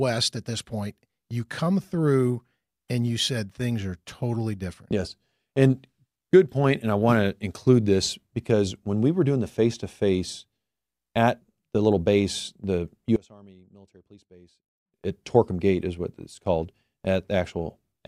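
One channel inverted, from 13.16 to 14.94 s in this speech recording. Just after "the little base the", the sound drops by about 26 dB to a faint residue. The likely cause is reversed polarity on one stereo channel, so the content shared by both channels cancels when they are summed to mono.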